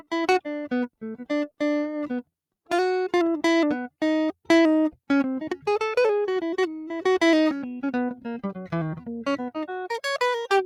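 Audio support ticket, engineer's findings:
No faults found in playback.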